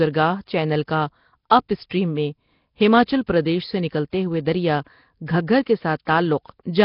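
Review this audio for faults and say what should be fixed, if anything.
Nellymoser compression, throughout the speech: everything above about 5.3 kHz is gone, and heavy damage leaves a rough, hissy halo with a smeared, underwater quality. This likely comes from Flash's Nellymoser Asao codec spending too few bits, which fits a bitrate near 22 kbps, so weak bands become noise fill. Record or transcode with a modern codec at a higher bitrate instead of the Flash microphone codec.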